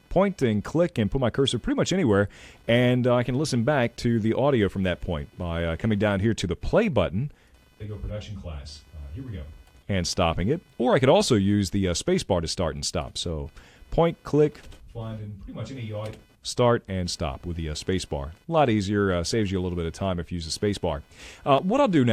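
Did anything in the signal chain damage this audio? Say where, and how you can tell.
Yes. Computer activity noise runs through the whole clip, a pulsing interference repeating at around 500 Hz and sitting roughly 40 dB below the wanted sound. The damage happened in the analogue wiring. Shifting load from the processor, graphics card or mouse moves the ground that the audio circuit shares with the computer, and that disturbance rides into the signal. It follows the machine's activity rather than the audio itself.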